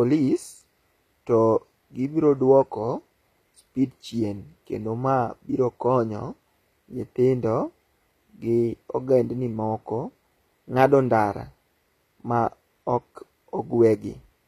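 Speech with HE-AAC compression throughout: the treble up to 14.9 kHz sounds gritty and lispy on s sounds, unlike a plain low-pass, likely from rebuilt bands at a bitrate near 24 kbps.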